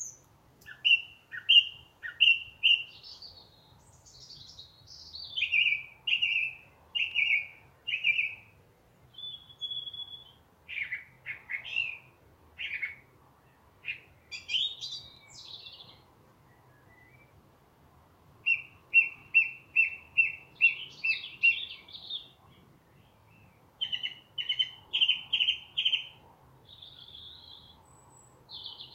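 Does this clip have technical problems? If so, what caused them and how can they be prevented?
Yes. The clip has overlapping chunks. A short stutter or click occurs at 3.09, 7.12, 11.14, 15.17, 19.19, 23.22 and 27.24 s. Each lasts about 25 ms. The joins come about every 4 s. Each new 4-second chunk begins 25 ms before the previous one ended, so that slice plays twice. The doubled moment breaks the flow and causes the regular tick. To prevent it, align chunk boundaries exactly, or crossfade and trim any overlap when joining chunks.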